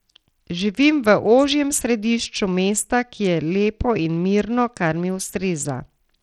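Bluetooth SBC compression runs throughout the speech, plainly audible from start to finish. The treble thins and flickers while gritty, grainy noise clings to the speech. This fits a small bit pool, around 80 kbps, starving the upper sub-bands, likely over a Bluetooth link.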